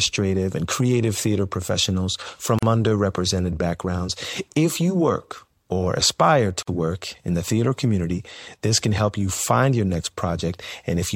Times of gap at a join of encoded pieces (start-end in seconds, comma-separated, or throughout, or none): 2.59-2.63, 6.63-6.67